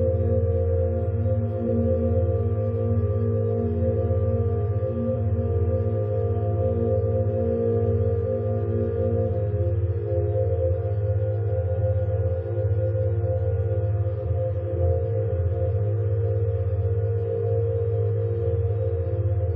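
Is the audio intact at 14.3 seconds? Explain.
No. Compressed frames skipped at 14.24 to 14.28 s. Missing or rejected frames go unplayed, so the sound jumps ahead about 300 ms, which fits roughly seven 46.4 ms frames.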